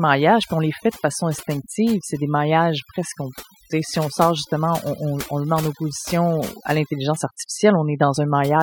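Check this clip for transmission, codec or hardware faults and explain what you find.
Overdone noise removal runs through the whole clip. A noise reduction stage set far too aggressively is comparing each frequency band against its estimate of the background and pulling down any band that falls close to it. Quieter parts of the speech sit near that threshold, so they are cut along with the noise. The gaps between phrases drop to near silence dotted with twinkling specks.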